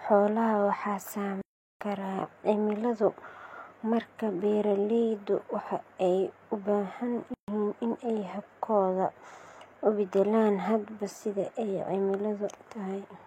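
At 1.41 s the speech just drops out and stays silent until about 1.81 s, a gap of roughly 390 ms, which sounds like a playback stall, likely the player running short of data or its thread getting held up. It happens again at 7.34 s, right after "waxa ay u baahan", with silence for about 140 ms before the talk picks up at "in ay".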